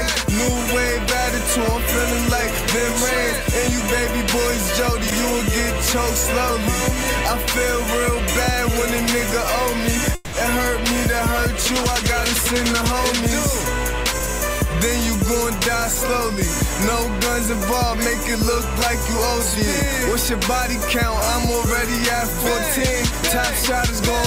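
A call audio freeze runs from 10.15 to 10.36 s. For about 180 ms the last sound is stretched into a fading buzz or hiss rather than dropping to silence, and the audio then resumes exactly where it stopped, with nothing lost. The likely cause is packets held up in transit, leaving the receiver's jitter buffer empty so it had to improvise a continuation. Everything after that point plays about 180 ms later than it otherwise would.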